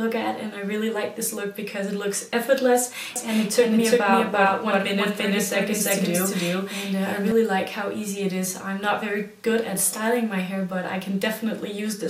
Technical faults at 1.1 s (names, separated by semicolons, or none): none